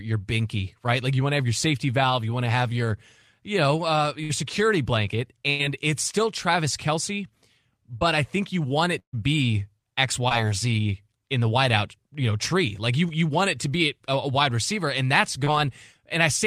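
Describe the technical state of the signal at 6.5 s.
At 6.5 s the speech signal is intact, with no technical fault audible at that point.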